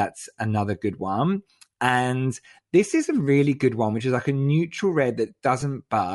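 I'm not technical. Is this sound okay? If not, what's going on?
No. All the way through, the speech has a breathy, grainy edge, as if a fine hiss were clinging to the voice. This is plainly audible, and it is likely Bluetooth LC3 compression, the squeezing that Bluetooth LE Audio earbuds and headsets apply to save bandwidth. The codec throws away much of the top end and fills the gap with noise. That is why the grain follows the voice itself, instead of sitting underneath it like steady background hiss.

At 5.61 s there is a brief smeared blip lasting about 10 ms, caused by lost LE Audio frames. One short chunk of audio never arrived, so the decoder filled the gap by reusing the previous moment's sound with its details scrambled. The result is a quick noisy smudge, not a sharp click or a hard silent dropout. This single blip differs from the constant graininess, which runs through the whole clip.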